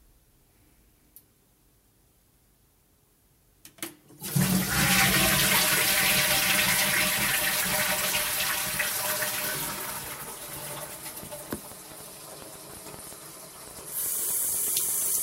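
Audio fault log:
10.50–15.19 s, train of clicks: a run of around forty sharp, similarly shaped clicks, at about 7.3 per second but unevenly spaced, ticking over the sound until nearly the end of the clip. Each click peaks at roughly the level of the sound itself. The cause is likely electrical interference from nearby equipment or a faulty connection or power supply repeatedly injecting brief pulses into the signal path.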